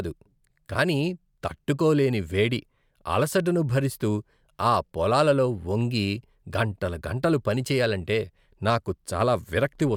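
No technical faults are audible.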